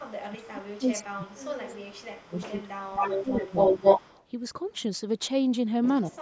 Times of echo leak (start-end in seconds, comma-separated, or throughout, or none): 0.05-0.19, 0.57-0.61, 1.10-1.45, 1.90-4.25